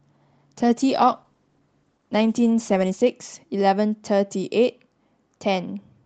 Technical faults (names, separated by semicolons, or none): call bitrate drop